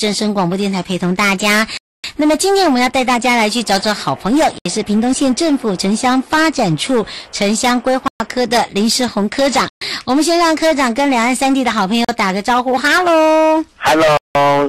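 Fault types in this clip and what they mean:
Hard clipping: the signal is pushed about 12 dB past what one stage in the chain can pass, so its peaks are sliced flat, with roughly one sample in seven stuck at the ceiling. Every loud passage carries a harsh fuzz rather than an occasional crackle. A waveform shows flat-topped plateaus throughout. A spectrogram shows harmonic energy smeared far up into the high kHz range above the loud moments.
Bluetooth stall: the audio drops to dead silence six times and then resumes, at 1.77 s for 265 ms, 4.58 s for 70 ms, 8.08 s for 121 ms, 9.70 s for 119 ms, 12.05 s for 40 ms and 14.17 s for 178 ms. The likely cause is the headphone buffer running dry while delayed wireless packets were resent. Each gap is a flat line on the waveform and a clean vertical blank band across all frequencies on a spectrogram.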